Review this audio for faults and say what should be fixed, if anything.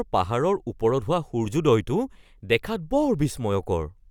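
No faults heard; nothing needs fixing here.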